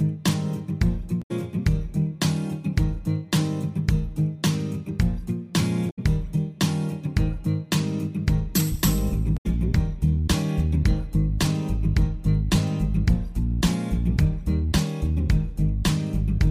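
Damaged data in a compressed stream occurs three times, from 1.19 to 1.31 s, 5.87 to 5.99 s, and 9.34 to 9.46 s. Each time a stretch of the encoded bitstream is corrupt, so the decoder misreads or discards the affected frames, loses sync and scans forward for the next valid frame header before playback recovers. Each event lasts about 0.12 s and breaks the sound with a chirp, squawk, click or short hole.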